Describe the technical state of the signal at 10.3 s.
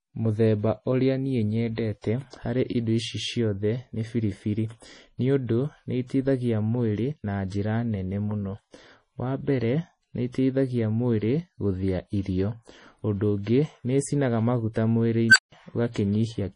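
At 10.32 to 10.34 s, just after "mbere nĩ", there is pre-echo lasting about 22 ms. Quantisation noise spread across a transform block is heard as a brief hiss ahead of the attack, which is softened. The whole passage also carries heavy codec damage, with nothing above 10.5 kHz, likely from MP3 compression at a low rate consistent with 32 kbps.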